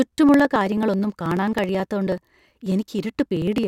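Speech with periodic USB or driver dropouts running from 0.07 s to 3.64 s. Every 0.054 s, roughly eighteen times a second, around 10 ms of audio is skipped outright, giving about seventy evenly spaced ticks that sound only while the voice is present. That strict spacing and the absence of silent gaps separate it from random buffer underruns or clipping clicks: a background task is likely stalling the bus or driver on a fixed schedule.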